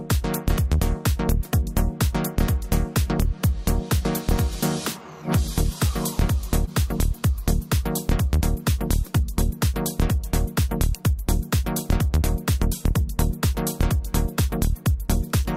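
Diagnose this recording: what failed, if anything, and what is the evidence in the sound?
At 6.65 to 6.69 s there is a brief smear, where the sound seems to hold and wobble for a moment before blending back. This is short concealed packet loss at the network stage. About 20 ms of audio arrived too late for the decoder, so the receiver extended the preceding sound for roughly 15 ms, shaping it from the last pitch or noise, and then cross-faded back into the real signal, which produced the smeared join.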